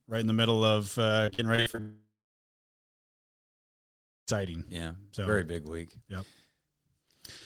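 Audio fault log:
1.25–1.80 s, repeated packet loss (robotic sound): seven short gaps, the longest 46 ms, are patched by repeating the last sound, giving choppy speech with pieces missing rather than one clean break.
1.80–4.29 s, long network dropout (likely cause): the last sound is stretched into a fading buzz or hiss, then about 2.2 s of silence, and speech resumes with that stretch missing, unlike an ordinary pause.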